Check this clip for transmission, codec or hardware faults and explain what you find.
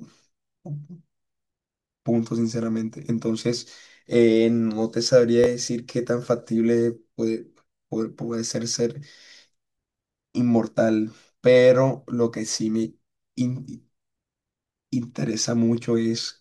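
Two playback faults occur, both repeated buffers. At 5.44 to 5.46 s and again at 7.74 to 7.82 s, fresh audio arrived late, so the device replayed its last chunk, consistent with a 20 ms buffer. The speech jumps with a hard join: a brief click at 5.44 s with one extra play, and a short buzzing stutter at 7.74 s with four extra plays. Roughly a few tens of milliseconds of speech are lost at each point.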